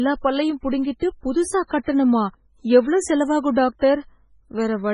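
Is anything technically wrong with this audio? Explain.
Yes, there's heavy MP3 compression damage across the whole speech clip, start to finish. The treble stops dead at about 10.5 kHz, and what's left sounds watery and swirly, with chirpy, metallic edges on the s sounds and smeared consonant attacks. That's likely an MP3 encoder starved of bits, consistent with something as low as 16 kbps, chopping off the highs and dropping weak frequency lines that then blink on and off between frames.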